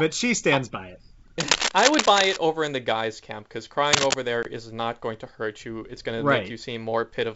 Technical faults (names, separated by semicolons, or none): cable scratch noise; packet loss on an ADPCM call